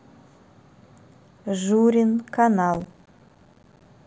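At 2.74 s the speech breaks into processor overload crackle that lasts until about 3.88 s. The processor could not finish its small audio buffers in time, and missed deadline after deadline. Each miss drops in a short stretch of silence with hard edges. The gaps sound only a few milliseconds long, which points to buffers of roughly 4 ms and around a hundred misses. Together they form a gritty, tearing crackle over the speech. It stops when the load eases.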